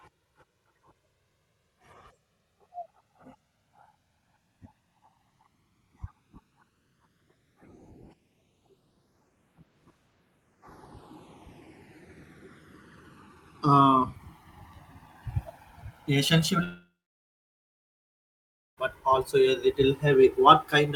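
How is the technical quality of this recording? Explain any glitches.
The recording has two clear faults: slow phase drift between the channels throughout, and a long gap near the end of the speech.

The channels drift apart for the whole clip. Each side appears to run on its own clock, off by a couple of hundred parts per million, so the delay between them grows to a few milliseconds by the end. Summed to mono, this gives a slow flanging sweep. On a spectrogram, comb-filter notches appear as faint curved lines that creep across the frequency range over the length of the clip.

From 16.63 s to 18.79 s there is a long network dropout, likely caused by packets that never arrived. About 2.1 s of sound is lost. The receiver stretches the last sound into a fading buzz, and then roughly 1.9 s of near-silence follows before speech returns at "but also a little". On the waveform this shows as a short decaying smear and then a flat line. 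The spectrogram shows a blank band.

The speech also carries the coding texture of an Opus call path, with content extending to about 12 kHz.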